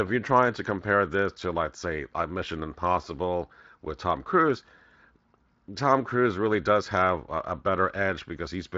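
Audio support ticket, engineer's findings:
Speech signal passes through the Speex path as expected, with only light coding texture audible and content ending near 7.7 kHz, consistent with a wideband Speex mode at a bitrate around 24 kbps.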